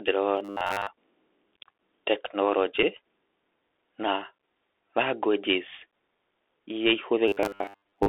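The whole clip passes through a Bluetooth CVSD headset codec, confined to roughly 300 Hz to 3.6 kHz, with scratchy sibilants and a granular hiss that fit 64 kbit/s CVSD. From 0.37 to 0.87 s a rigid metallic buzz at 100 Hz sets in, robotic sound likely from repeated short buffers of about 10 ms, with most of the audio replaced by repeats. At 2.83 s a single Bluetooth headset packet repeated leaves only a brief tick of about 3.8 ms, not a sustained 267 Hz buzz. The same 100 Hz robotic buzz returns from 7.28 s to the end.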